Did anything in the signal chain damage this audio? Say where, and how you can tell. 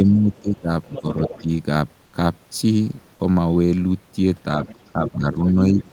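Yes, the damage comes from call processing, in the echo canceller and the codec's silence handling.

Speech suppressed in double talk shows up from 0.04 to 0.69 s, 1.01 to 1.48 s, and 4.93 s to the end. The talker's level sags while the far side is active, by about 15 dB, about 10 dB and about 20 dB at the deepest points. On a waveform the envelope pinches in mid-phrase. The likely cause is a canceller that couldn't separate near-end speech from loudspeaker echo and attenuated both.

The other side's voice leaking through appears as a second, fainter voice under or between the talker's: a brief trace at 0.33 to 0.41 s (about 35 dB down), a strong stretch at 0.84 to 1.43 s (about 10 dB down), 4.62 to 5.11 s (about 15 dB down), and 5.79 to 5.91 s (about 25 dB down). On a spectrogram it shows as a separate set of harmonic bands that don't track the talker's pitch. Residual loudspeaker echo the canceller didn't remove is the likely source.

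Comfort noise in place of the background occupies 2.05 to 2.13 s, an 80 ms gap where the real room noise, otherwise about 41 dB under the speech, turns into a smooth, featureless hiss about 2 dB quieter. A spectrogram shows a flat, texture-free patch with abrupt edges. The likely mechanism is discontinuous transmission, consistent with Opus DTX, where the receiver synthesised noise during a pause the sender judged silent.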